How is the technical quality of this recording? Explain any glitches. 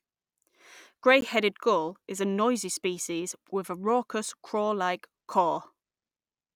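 The recording has one glitch, a block of digital silence at about 1.21 s. For roughly 15 ms the output held nothing but zeros, most likely because the program failed to fill its output buffer before the device needed it. The speech drops straight out and snaps back with no fade. With a gap this short, it is heard as a tick or dip rather than as silence.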